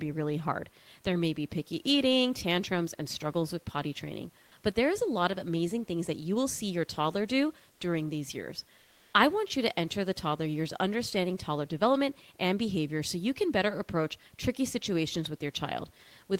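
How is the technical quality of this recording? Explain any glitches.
There is one glitch against the room noise, which sits about 39 dB below the speech. From 8.81 to 9.13 s, the comfort noise in place of the background lasts 320 ms. The natural room texture gives way to a flat, featureless hiss, about 1 dB quieter. The likely cause is discontinuous transmission, such as Opus DTX: the sender pauses during silence and the receiver fills the gap with synthetic noise.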